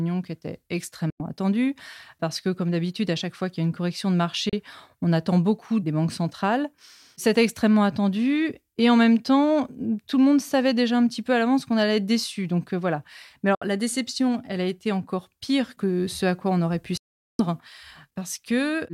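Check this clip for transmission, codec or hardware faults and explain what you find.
Four digital broadcast dropouts occur in this speech: at 1.1 s after "qui était" (96 ms), at 4.49 s (32 ms), at 13.55 s before "la déception elle a" (64 ms), and at 16.97 s after "quoi on aurait pu" (416 ms). The receiver muted through corrupted frames, whose lengths fit whole 32 ms frames. Each time, the sound snaps to silence within 3 ms, and the missing audio never returns.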